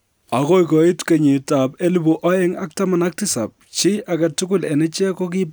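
No technical faults can be heard anywhere in the recording.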